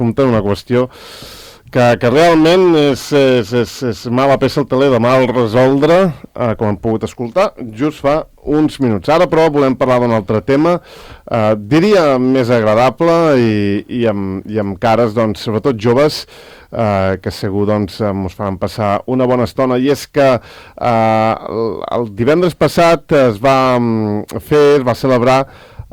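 Hard clipping runs through the whole clip: the signal reaches some stage about 13 dB hotter than it can pass, so around a tenth of the samples are sheared flat at the ceiling. Those flattened peaks spray high harmonics, giving every loud moment a harsh, gritty fuzz.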